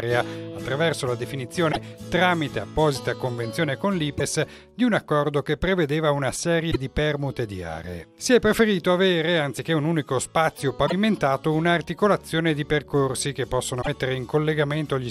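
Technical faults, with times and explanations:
1.69–1.77 s, 4.14–4.21 s, 6.68–6.76 s, 10.83–10.93 s and 13.78–13.88 s: damaged data in a compressed stream. Each event is a short burst of about 70 to 100 ms where the compressed frames carry corrupted bytes. The decoder misreads or rejects those frames and loses sync until it finds the next valid frame header, so the sound breaks into a brief chirp or squawk before normal decoding resumes.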